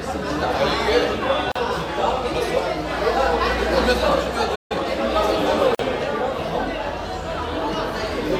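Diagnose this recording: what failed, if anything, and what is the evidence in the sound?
Gaps at a join of encoded pieces, at 1.52 to 1.55 s and 5.75 to 5.79 s, come from the codec and storage stage. Silences of 38 ms and 45 ms break continuous sound with softened edges. Separately encoded segments were joined with their start delay and end padding untrimmed.

A playback stall from 4.55 to 4.72 s cuts the sound off mid-flow for about 148 ms before it resumes where it left off. The likely cause is the player's buffer running dry or its output thread being blocked.

Time-compressed catch-up follows at 4.72 to 4.86 s. The player clears its backlog at 2x speed by cutting and cross-fading short slices, so the sound is rushed at unchanged pitch.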